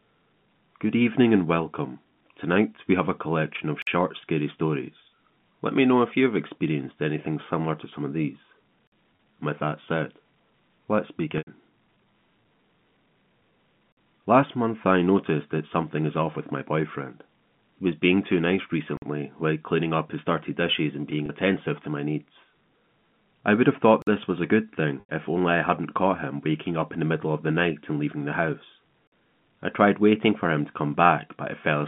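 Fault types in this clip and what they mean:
gap between chunks: The audio was delivered in pieces about 5 s long, and each join left a stretch of silence instead of running straight on. Nothing is missing, but the flow is cut by a 50 ms hole at 3.82, 8.87, 13.92, 18.97, 24.02 and 29.07 s. The strict 5 s spacing makes the dropouts sound mechanical, unlike natural pauses.
packet loss with pitch repetition: Pieces of the stream failed to arrive, and the receiver filled each hole by repeating the last pitch cycle and fading it out. The 30 ms losses at 9.16 s, after "to some of these", and at 21.26 s, between "dirty dishes and being" and "attentive to my needs", sound like a brief buzzy hold, which fits one lost packet each. The 90 ms losses at 11.38 s and 25.0 s, between "this was a good" and "if only I hadn't", fade toward silence before the sound cross-fades back in, which suggests about three packets lost each time.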